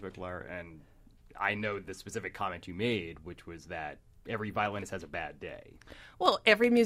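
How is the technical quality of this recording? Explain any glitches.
The recording has one fault: periodic USB or driver dropouts. From 4.66 to 6.77 s, a fraction of a millisecond of audio is skipped every 64 ms, about thirty times. A background task blocks the bus or driver on a fixed schedule. The result is regular ticks, heard only while the speech is present.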